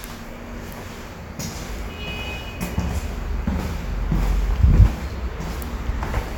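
A recording of everyday sounds, with no technical fault to report. There is nothing here that needs a time or a cause.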